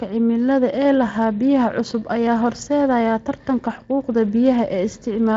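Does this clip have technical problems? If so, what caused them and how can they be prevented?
No, this clip has no technical problems, so there is nothing to prevent.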